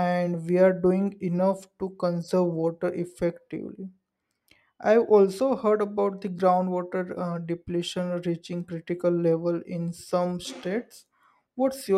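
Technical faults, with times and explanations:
No technical faults can be heard in the speech.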